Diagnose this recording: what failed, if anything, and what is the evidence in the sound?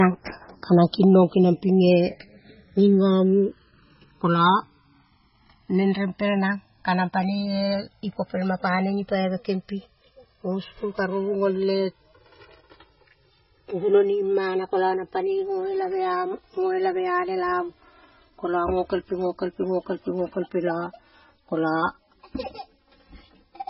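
Two faults run through the whole recording.

The stereo channels drift apart over time. The stage is the converter clocking: the two channels were captured by devices running on separate clocks. Their rates differ by roughly 150 parts per million. The gap between channels grows steadily, reaching about 4 ms by the end of the speech. Folded to mono, that sliding delay moves comb-filter notches slowly across the spectrum. It is heard as a slow, sweeping flange across the clip.

The second fault sits at the codec stage. Nothing is present above 5.6 kHz, so the top end sounds dull and boxy. Weak spectral detail flickers in and out from frame to frame. This gives the speech a watery, swirling texture, with chirpy sibilants and smeared onsets. The damage is heavy. The likely cause is MP3 compression at a very low bitrate, which fits something around 16 kbps. Starved of bits, the encoder cut the treble and dropped quiet components.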